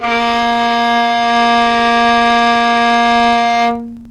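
From start to finish, a filter in the chain is restarted on every block, losing its state and beginning each block from silence. Each block therefore opens with a small transient, and these stack into a steady buzz at about 23.4 Hz, which fits a 2048-sample block. The ticks are not a fixed noise. They rise and fall with the level of the sound, loudest where the sound is strongest.

At 0.98 s, a hybrid radio receiver loses its digital signal and blends to the FM analogue broadcast of the same station. The cross-fade takes about 402 ms. A hiss floor appears, roughly 35 dB below the signal, and the level shifts by about 1 dB. At 3.71 s the receiver blends back to digital, removing the hiss.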